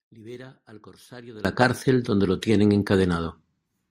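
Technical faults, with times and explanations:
0.0 to 1.45 s, one channel inverted: for the first stretch the speech drops by about 22 dB and turns faint, then returns to full level. The likely cause is reversed polarity on one stereo channel, so the centred voice cancels when the channels are summed to mono and only their small difference survives. On a waveform the opening is a much smaller envelope; a spectrogram shows faint energy.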